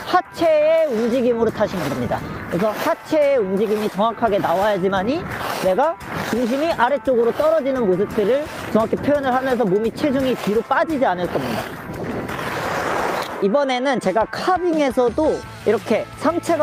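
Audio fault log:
Nothing stood out on listening; the audio gave no cause for concern at any point.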